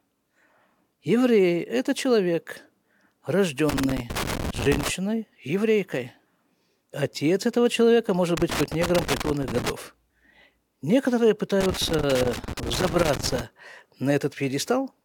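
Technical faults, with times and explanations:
3.69–4.90 s, 8.37–9.70 s (just after "этого человека может") and 11.61–13.41 s, loose connector crackle: a worn or dirty contact keeps making and breaking, chopping the speech signal, heard as irregular bursts of scratchy crackle lasting one to two seconds each.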